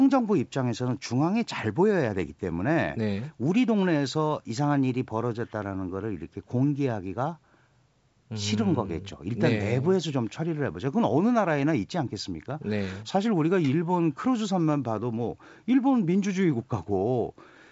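Speech with no technical fault to report. The sound carries nothing above about 8 kHz, as expected from call microphone processing followed by G.722 wideband telephone coding, and the light upper-band texture fits the codec's full 64 kbit/s mode.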